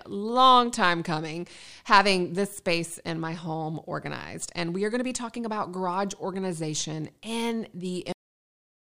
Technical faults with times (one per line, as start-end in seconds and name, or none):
8.12-8.89 cut-off end